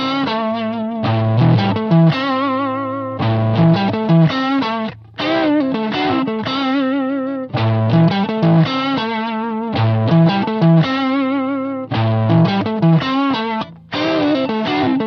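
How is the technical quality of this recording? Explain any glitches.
The technical quality of this recording is good, and there are no glitches to explain.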